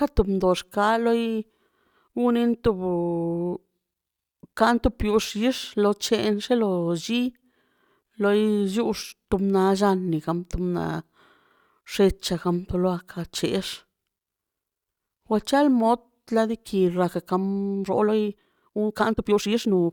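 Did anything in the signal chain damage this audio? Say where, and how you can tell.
Yes. There is a time-stretched section from 17.65 s to the end at 19.92 s, where the speech suddenly runs about 1.63 times faster with unchanged pitch and sounds rushed. The likely cause is editing software before storage squeezing the passage by dropping short pieces to preserve pitch.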